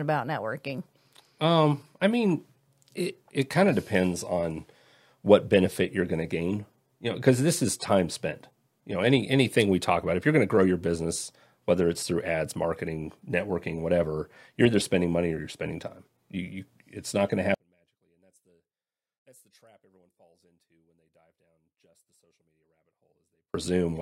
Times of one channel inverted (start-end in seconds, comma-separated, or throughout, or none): 17.54-23.54